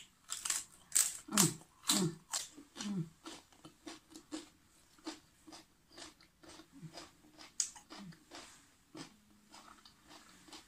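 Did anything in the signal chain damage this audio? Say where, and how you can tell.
Yes. The damage sits at the codec stage, in the MP3 stream. From 2.37 to 2.42 s, the sound breaks for about 57 ms and skips forward. That span matches roughly two 26.1 ms MP3 frames. The likely cause is a broken MP3 bit reservoir. Frames were lost, and the next frames reached back for borrowed data that was no longer there. The decoder used bytes from the wrong frame and garbled that short stretch.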